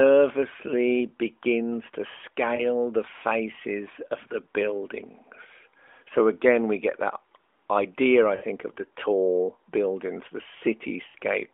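Speech, heard through a narrowband mobile line, has brief warbling dips and smeared gaps at 2.56 to 2.67 s (after "begins to"), 8.36 to 8.44 s (after "get that idea I") and 11.08 to 11.15 s. These are lost AMR speech frames: the decoder filled the gaps with the last good voice settings, fading them out. The first fits one lost 20 ms frame, the others about three.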